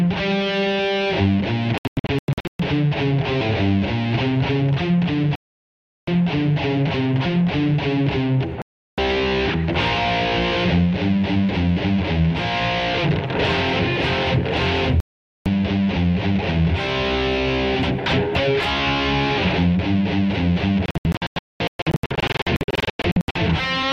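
Digital broadcast dropouts occur at 1.78–2.60 s, 5.35–6.08 s, 8.62–8.98 s, 15.00–15.46 s and 20.86–23.36 s. Each time the receiver mutes on corrupted frames, leaving silent holes. The first and last are scattered bursts, with runs up to 0.22 s.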